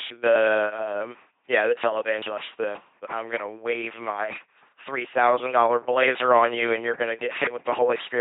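LPC-10 vocoder damage runs throughout this speech clip: every moment is resynthesised from a ten-pole vocal tract filter driven by either a pulse buzz or noise, giving a heavy robotic timbre, nothing above 3.7 kHz, and a sound that fits a 2.4 kbit/s encode.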